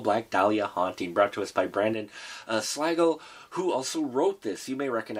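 From 1.94 s to the end, one channel drops out, likely a lost stereo side, so the summed sound falls abruptly by about 6 dB.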